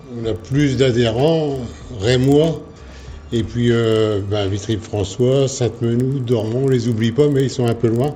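There's a steady tick running under the audio the whole way through, about 25 per second, which is a classic resampler restarted on every block. The 16 kHz to 48 kHz conversion was done in 40 ms chunks with no carried-over state, so each block edge leaves a small error that clicks whenever there's signal.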